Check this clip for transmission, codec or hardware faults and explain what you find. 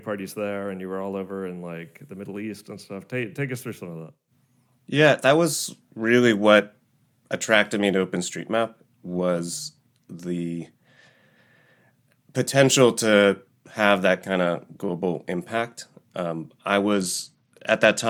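One fault: a Bluetooth SBC bit pool drop from 16.93 s to 18.09 s, where the congested link forced coarser encoding, consistent with bit pool 28 falling to 12 (about 96 kbps), dulling treble and adding gritty noise.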